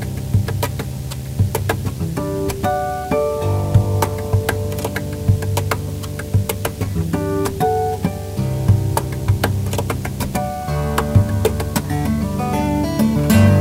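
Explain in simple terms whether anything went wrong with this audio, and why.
Yes, something went wrong: a video or display buzz runs from start to finish. A screen or its cable leaked into the audio wiring, adding a steady 75 Hz buzz with a fizzy hash above it, matching the display's refresh rate, and it sits fairly loud under the sound.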